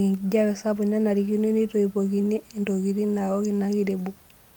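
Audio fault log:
No faults found.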